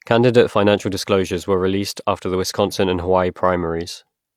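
No technical faults are audible anywhere in this speech.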